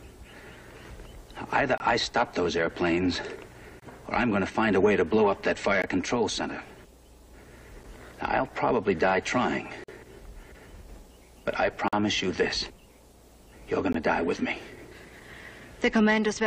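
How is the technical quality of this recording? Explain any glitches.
The recording has one recurring fault: short, hard-edged dropouts to silence about every 2 seconds.

These are gaps between stream segments, at 1.78–1.80, 3.80–3.82, 5.82, 7.83, 9.84–9.89, 11.88–11.93 and 13.93–13.95 s. Each abruptly cuts the sound for roughly 7 to 47 ms. Adjacent 2-second segments don't quite meet in time, so the player fills each gap with silence. No audio is lost.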